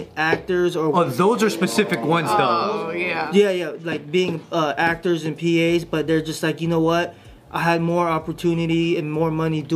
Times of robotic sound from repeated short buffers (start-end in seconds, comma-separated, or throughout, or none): none